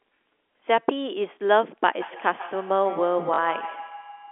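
From 2.01 s to the end of the clip, each syllable comes back roughly every 150 ms, thinner and with a metallic ring. The repeats peak at about 12 dB below the speech. This is feedback echo between two devices: a second device in the same room plays this talker's audio aloud, and the microphone here picks it up and sends it around again. Each device's echo canceller removes only what its own loudspeaker plays.

At 3.34 s a 40 ms stretch turns into a brief buzzy, robotic stutter. This is packet loss with the last packet repeated. Audio went missing, and the receiver replayed the last good chunk until fresh data arrived, which fits two lost 20 ms packets. Each replay is spliced in without regard to the pitch cycle, and the repeats buzz at the packet rate. The narrow telephone band of the G.711 line carries the stutter along with everything else.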